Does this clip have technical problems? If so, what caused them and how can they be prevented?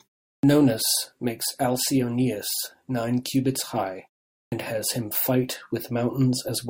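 Yes. The speech shows a clipped start after a pause at two points. At 0.39 s, following 0.39 s of silence, about 43 ms of the onset is swallowed. At 4.48 s, after a 0.47 s pause between "nine cubits high" and "has him fight", about 40 ms is lost. In both cases the output device sleeps during silence and needs time to wake and relock, so the sound begins abruptly without its first sounds. To prevent it, disable the device's idle power-saving or keep the stream active with a continuous low-level signal.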